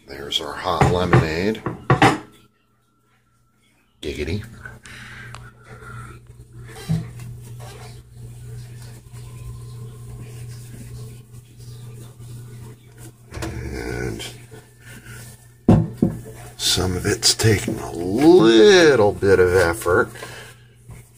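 No technical faults are audible.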